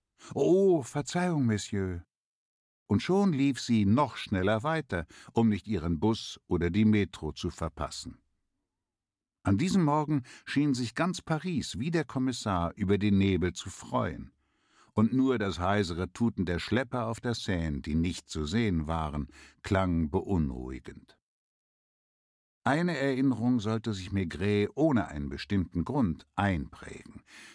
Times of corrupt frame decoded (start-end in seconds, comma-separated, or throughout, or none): none